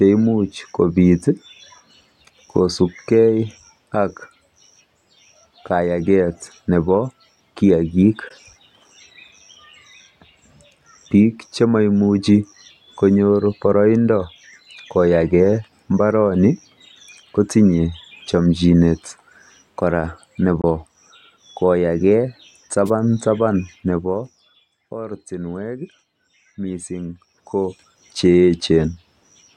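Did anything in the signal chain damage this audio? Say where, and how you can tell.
Yes. AAC frame loss with muting at 8.28–8.31 s and 20.62–20.64 s, a codec-stage fault: each gap lasts about 21 ms, which fits one missing frame, and the decoder zeroes it so overlapping windows fade the sound softly out and back in.

Wireless microphone noise hit at 22.86–22.90 s, from the analogue radio link: a brief swish of static appears as the FM signal fades and receiver noise rises over the speech.

Zipper noise at 23.65–24.82 s, as the level falls about 15 dB, and at 27.05–27.88 s, as it rises about 15 dB. Gain is applied in buffer-sized steps, around a hundred per second, with no smoothing, so a fine ticking rides on the speech.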